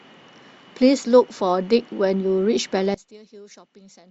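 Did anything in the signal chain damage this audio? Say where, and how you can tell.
Yes. One channel inverted, from 2.94 s to the end at 4.10 s: the speech drops by about 25 dB, as the shared centre content cancels when the channels sum to mono. The likely stage is analogue wiring, with a reversed-polarity connection on one side.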